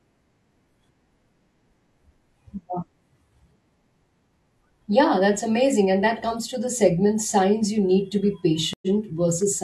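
At 8.73 s the speech drops out for 88 ms in a stream reconnect: the connection broke, the player stalled, then re-established the link and started a new decoder partway through the stream. When sound returns, around 8.87 s, it picks up 46 ms earlier than where it stopped, so a short stretch of the speech is heard twice. On the restart, the first moment after the gap is muted or fading in.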